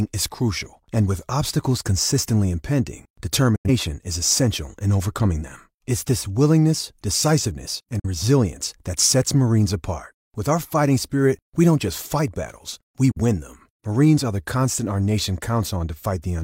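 Digital broadcast dropouts break this speech clip three times: 3.56 to 3.70 s, 7.99 to 8.07 s, and 13.11 to 13.21 s. Each time the sound fades out over about 8 ms into silence because the receiver muted on frames it could not decode. The first hole loses about 85 ms and the other two about 43 ms each, which fits two lost frames and then single lost frames. The speech resumes later, with the missing stretch gone.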